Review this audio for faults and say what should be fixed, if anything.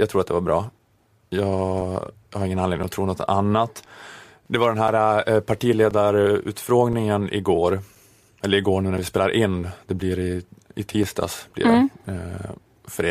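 Regular ticks break into the speech about once a second, from 0.79 s to 12.06 s, roughly ten in all, each a gap of a few milliseconds filled with silence and heard only where there is signal. The even 1.02 s spacing points to periodic USB or driver dropouts, where a background task repeatedly stalls the USB bus or audio driver and a short slice of audio is lost each time. To prevent it, find and disable the recurring background process, or raise the driver's buffer size so it can ride through the stalls.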